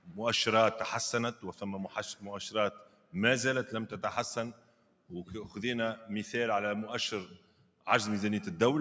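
Throughout, a noise suppressor built for speech is acting on music or sounds, treating sustained material as noise, so level swings by around 10 dB. Attacks pass while held parts sag, which distinguishes it from a compressor, whose pumping follows loudness rather than steadiness.

The sound is cut by the noise suppressor at 0.0–0.16 s, 1.34–1.62 s, 2.71–3.14 s, 4.53–5.11 s and 7.26–7.86 s, with drops of about 12 dB (about 10 dB at 1.34 s). Sustains sink and decays shorten rather than vanishing abruptly as a dropout would.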